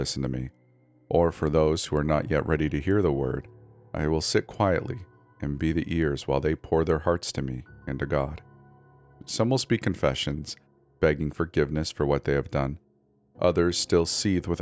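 Nothing in the recording stood out as a technical problem on listening.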